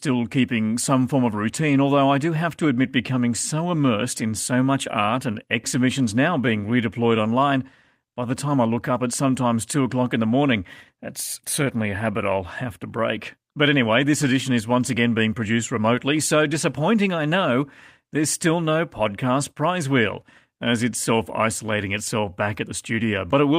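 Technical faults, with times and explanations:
No technical faults can be heard in this speech recording. The audio stays steady and continuous from one moment to the next.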